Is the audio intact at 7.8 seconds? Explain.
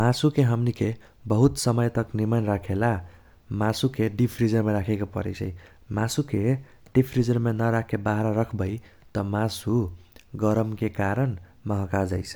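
Yes, the audio is intact at 7.8 seconds, with no fault at that moment.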